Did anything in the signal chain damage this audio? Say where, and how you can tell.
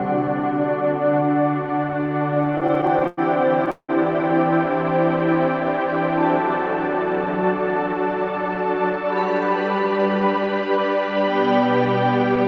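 Yes, the damage sits in the network and jitter-buffer stage of a call path.

Repeated stalls (stutter), 2.01 to 3.19 s: the audio catches and drags sixteen times in just over a second, with the longest hold about 103 ms. Roughly 270 ms of continued sound, nearly a quarter of that span, was inserted. Packets were arriving late or too slowly, so the jitter buffer kept running dry and the receiver stretched the last sound over each wait. Nothing is lost, but the flow is broken.

Call audio freeze, 3.71 to 3.91 s: the sound hangs as a fading continuation of what came before, then drops to about 80 ms of silence before resuming where it left off. About 180 ms was filled in total, and the playback delay grows by that same 180 ms afterwards. The likely cause is a single burst of held-up packets that emptied the buffer completely. The receiver concealed the gap rather than discarding anything.

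Jitter buffer speed-up, 9.75 to 10.78 s: the audio runs at about 112% speed with its pitch unchanged, so the passage sounds hurried. The buffer had accumulated more audio than it aims to hold, probably from delayed packets landing together. To pull the delay back down, the receiver cut out pitch-period-sized pieces in quick succession, removing roughly 150 ms overall. The call codec's band limit at 8 kHz can be heard throughout.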